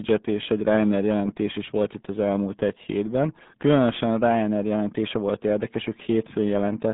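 Throughout the speech, the RealAudio 14.4 codec leaves vowels muffled and gargly, heavy damage that fits an 8 kbit/s dial-up coder. A spectrogram shows energy confined to 150 Hz–3.6 kHz, with a bare ceiling above 3.8 kHz.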